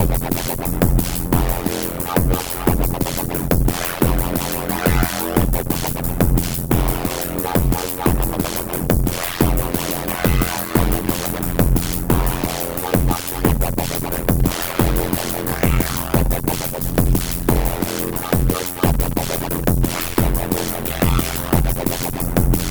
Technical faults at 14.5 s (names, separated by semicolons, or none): overlap-add ripple